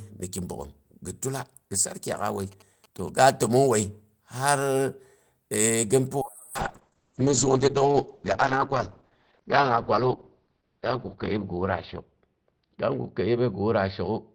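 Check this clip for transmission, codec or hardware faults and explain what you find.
Two faults are present: interference from a nearby phone, then a drop in the call's coding rate.

GSM signalling bursts, 2.52 to 3.48 s: a nearby 2G phone's radio bursts are rectified by the audio circuitry, producing faint galloping ticks and a 217 Hz buzz well beneath the speech.

Call bitrate drop, 6.22 s to the end: the bandwidth estimate fell, so the encoder coded far more coarsely, which fits a fall from about 32 to 7 kbps. The audio band narrows from 20 kHz to 6 kHz, so speech turns muffled and rough, staying at its worst for about 4.8 s.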